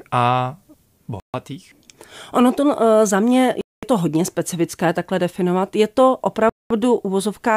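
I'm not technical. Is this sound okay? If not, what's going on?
No. The speech drops to dead silence three times, at 1.20 s, 3.61 s (right after "za mě", before "to hodně specifické takhle") and 6.49 s, each gap under a quarter of a second. That's a Bluetooth stall, likely from wireless interference briefly starving the headphones of audio.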